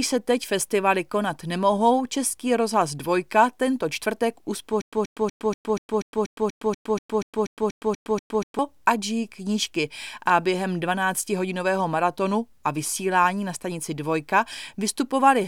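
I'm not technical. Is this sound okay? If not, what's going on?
No. Stutter with silent gaps from 4.82 to 8.59 s, between "tento čtvrtek" and "ať žijí knížky a": a 132 ms scrap of speech repeats 15 times, each followed by 109 ms of silence. Playback likely stalled, replaying its last fragment at each retry, so that stretch is lost.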